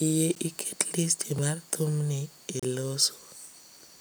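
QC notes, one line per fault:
0.35, 1.38 and 2.60–2.63 s, block of digital silence: sound drops to silence and back without fade; 0.35 s (10.67 ms, fitting a 512-sample buffer) precedes "iket listi mar thumni", 1.38 s (3.06 ms) sits before "mar thumni e", 2.60 s lasts 32 ms.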